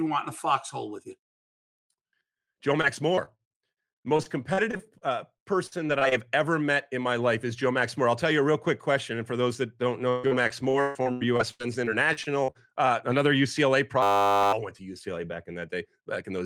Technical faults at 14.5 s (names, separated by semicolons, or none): system hang loop